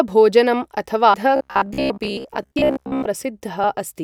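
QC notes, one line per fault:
1.13 s and 3.63 s, damaged data in a compressed stream: two brief blips, each lasting roughly a hundredth of a second. Corrupted bytes in the compressed stream leave the decoder unable to read those frames. It loses sync, emits a short burst of garbage, and resumes at the next valid frame header. That is why each defect is a brief glitch.
1.36 to 3.09 s, robotic sound from repeated short buffers: the speech turns into a rigid metallic buzz pitched at 66.8 Hz for most of this stretch while still loosely tracking the speech. A fixed pitch at that frequency fits a segment about 15 ms long being replayed over and over. The likely cause is audio arriving too slowly, so the software repeats the last buffer in place of the skipped material.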